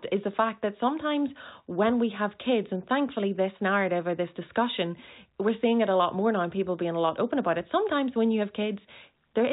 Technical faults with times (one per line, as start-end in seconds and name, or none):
none